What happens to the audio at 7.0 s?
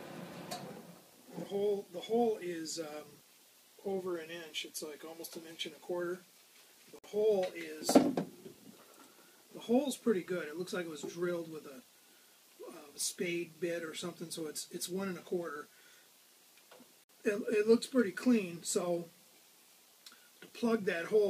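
At 6.99 s the sound drops out for about 52 ms, resuming at 7.04 s. It is a gap at a join of encoded pieces: separately encoded segments were spliced without trimming encoder delay and end padding, leaving a silence with smeared edges before the sound continues.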